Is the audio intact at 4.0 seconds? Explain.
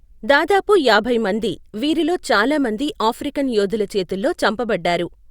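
Yes, at 4.0 seconds the speech plays through intact, with no audible dropout, click, distortion or other fault at that moment.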